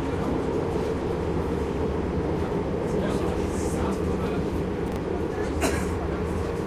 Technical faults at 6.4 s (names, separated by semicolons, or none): none